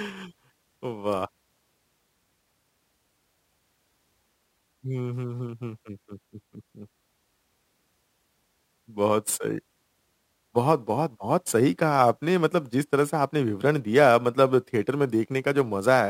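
A crude rate conversion runs through the whole speech recording. The sample rate was raised by repeating the nearest sample instead of filtering, which fits a 44.1 kHz to 48 kHz change. The repeated samples fall in a fixed cycle set by the two rates and add shifted, inharmonic copies of the speech, roughly 25 dB below it. The result is a gritty, inharmonic fizz that rides on louder and brighter sounds.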